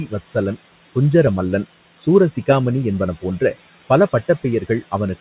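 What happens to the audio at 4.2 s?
Noise suppressor artifacts are present at 4.2 s, as they are throughout the clip. The suppressor judges, frame by frame, which frequency bands hold steady background noise and pulls them down by about 15 dB. The room noise, about 17 dB under the speech, therefore sinks in the gaps and swells back beneath the speech, within a band that stops at 4 kHz.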